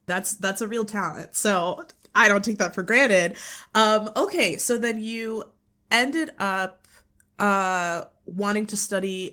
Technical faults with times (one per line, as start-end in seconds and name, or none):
none